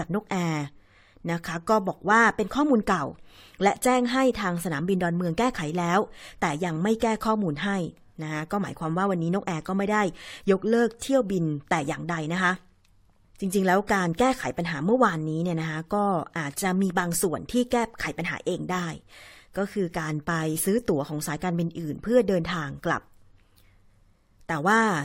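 No technical faults can be heard anywhere in this speech recording. There is nothing in the audio to mark in time order.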